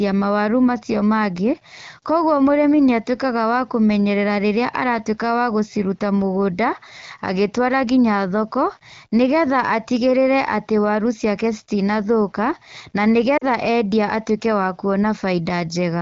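Lost AMR speech frames at 13.37 to 13.45 s: about 40 ms of speech, which fits two 20 ms frames, failed their checksum, so the wideband decoder repeated the last good pitch and vocal tract settings at falling gain, giving a brief smeared dip before the voice returns.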